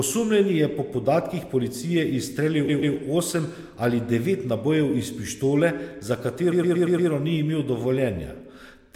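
A stutter at 2.67 to 2.95 s replays a 0.13 s slice twice more, and at 6.51 to 7.09 s, after "pištole za" and before "ni imel", a 0.12 s slice loops five extra times. Both are repeated frames: compressed blocks resent, lengthening the speech by 0.28 s and 0.58 s.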